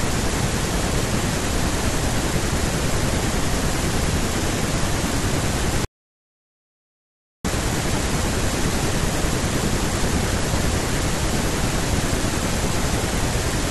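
At 5.85 s the speech cuts to silence until 7.45 s, an audio dropout to silence, likely a lost input while recording continued.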